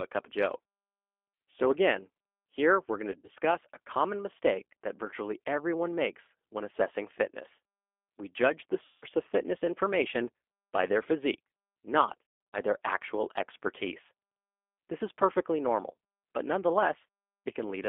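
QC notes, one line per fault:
throughout, G.729 codec: the speech is rebuilt from a vocal tract filter, a pitch predictor and sparse pulses, which gives a plainly audible rough, synthetic texture consistent with 8 kbit/s, and the band is held to about 300 Hz to 3.5 kHz.
3.12–3.38 s, 8.86–9.06 s, 12.52–12.59 s, VoIP packet loss concealed by the speech codec: after "again here we're going", "judge the" and "by their physique not", the decoder bridges 120, 160 and 240 ms of missing audio. It extrapolates the last pitch and filter into a fading buzzy tone or coloured noise, and the sound stays weak or distorted after packets return.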